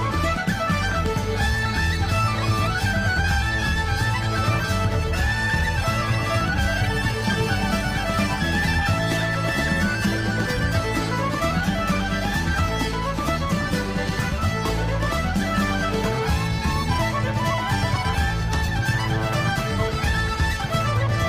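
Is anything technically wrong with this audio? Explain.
No, nothing technically wrong can be heard anywhere in this audio.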